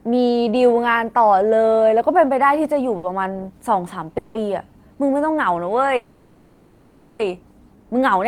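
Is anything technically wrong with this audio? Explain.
Yes. The speech has three jitter-buffer faults.

From 2.97 to 3.05 s there is a short stall from a late packet. One packet missed its playout time, so the jitter buffer ran dry and the receiver stretched the last sound by about 60 ms until the packet arrived. Playback then resumed from the same point. Nothing is lost, but that moment of speech is held audibly too long, with a faint buzzy smear or a slight dip before normal sound returns.

Two call audio freezes follow. In each, packets were likely held up in transit long enough to empty the jitter buffer, and the receiver filled the wait by continuing the last sound. The first runs from 4.18 to 4.37 s and adds about 170 ms. The second, from 5.96 to 7.21 s, adds about 1.23 s. Both times the held sound turns into a buzz or hiss that fades without ever dropping to silence, and the speech then picks up exactly where it stopped. 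Nothing is missing, but gaps have been inserted and everything after them plays later.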